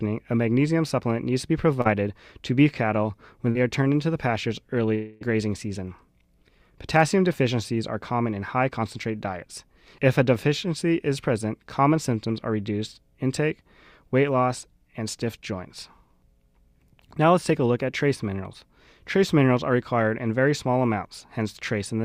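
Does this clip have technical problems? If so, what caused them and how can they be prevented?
Yes. At 1.81 s and again at 3.51 s there are brief smears lasting about 40 ms each, the signature of short concealed packet loss. A few hundredths of a second of audio arrived too late to decode, so the receiver extended the preceding sound and blended back into the real stream. Unlike a dropout, the gap is too short to fade out, so it passes as a quick wobble rather than a hole. A larger jitter buffer, forward error correction or a steadier connection would prevent it.

From 4.95 s to 5.23 s the sound turns into a fading buzz or hiss for about 260 ms before normal audio resumes, with the missing stretch never recovered. This is most likely a long network dropout: no packets arrived for over a quarter of a second, and concealment filled the entire gap. Compared with the short losses, the filler lasts long enough to audibly decay, though here it never reaches silence. 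A more reliable network path, such as wired rather than congested wireless, would prevent it.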